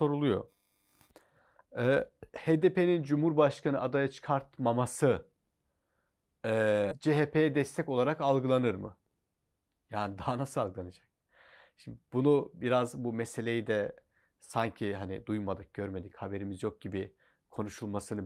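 At 6.91 to 6.93 s, a skip ahead occurs: a stretch of speech, around 0.4 s, was discarded while later audio was already queued, so playback jumps straight forward with no gap fill. The speech lurches, and the two sides are spliced almost directly together.

From 7.53 to 8.09 s, just before "algılanır mı", the jitter buffer speed-up trims excess held audio by cutting many short pitch-period pieces, roughly 40 ms in total. The speech runs at about 105% speed, slightly hurried, with its pitch unchanged.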